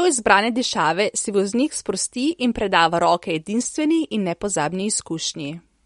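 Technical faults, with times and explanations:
Throughout, MP3 compression: the top end stops dead at about 11.2 kHz, and the speech carries a plainly audible watery, swirly texture. That's most likely a low-bitrate MP3 encode, and the damage fits something around 48 kbps. With that few bits, the encoder chops the treble at a fixed point and drops the quieter frequency detail, which then flickers in and out from frame to frame, so the sound seems to shimmer.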